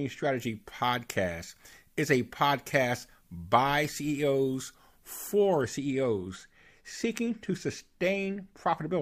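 From 0.37 to 5.61 s there is pre-emphasis left on: an FM 50 µs treble boost was never de-emphasised, so 10 kHz sits about 11 dB above 1 kHz. The speech sounds thin, bright and sibilant. A spectrogram shows abnormally dense energy above 5 kHz throughout.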